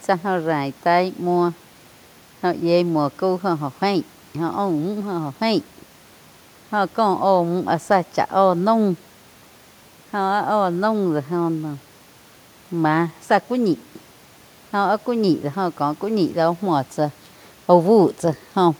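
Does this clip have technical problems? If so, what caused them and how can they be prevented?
No, nothing in this speech recording points to a technical fault, so there is no cause to trace and nothing to prevent.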